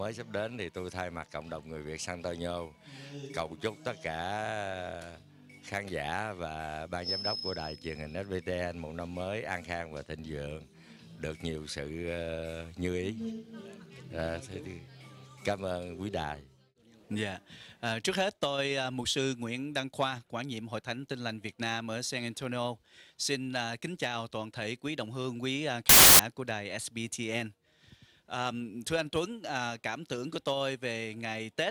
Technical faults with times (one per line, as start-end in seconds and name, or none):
25.89-26.19 samples built from the wrong bytes